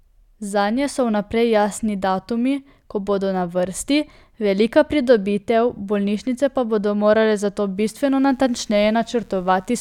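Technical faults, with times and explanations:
7.75 to 9.81 s, mains buzz: right after "pa bodo morale zato" a steady, raspy buzz comes in under the speech and runs to the end. It's quiet, roughly 40 dB down from the speech. It's built on 60 Hz, with sharp switching spikes twice per mains cycle. That spiky shape spreads energy across harmonics reaching up into the kilohertz range, so it rasps instead of humming smoothly.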